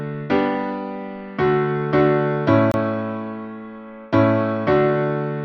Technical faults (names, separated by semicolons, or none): gap at a join of encoded pieces